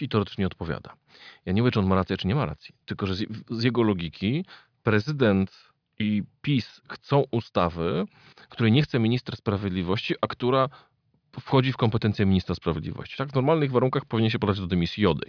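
No technical faults are audible anywhere in the speech recording.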